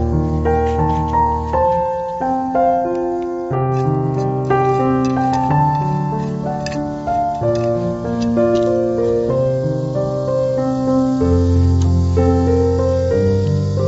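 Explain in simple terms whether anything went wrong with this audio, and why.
Nothing went wrong with this audio: there are no technical faults anywhere in the recording.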